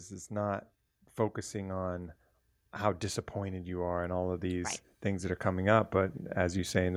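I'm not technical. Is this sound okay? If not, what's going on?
No. From 2.8 s to about 6.9 s, the recording's automatic gain control decided the input was too quiet and slowly turned its own volume up, an automatic gain rising fault. Because the whole signal gets boosted, the speech and the background noise behind it swell louder together over those few seconds, rather than the person simply speaking up. It's a gradual climb, not a sudden jump, lasting right to the end of the clip.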